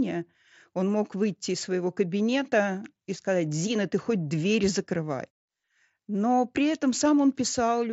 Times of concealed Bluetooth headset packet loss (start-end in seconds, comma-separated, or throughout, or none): 2.19, 3.78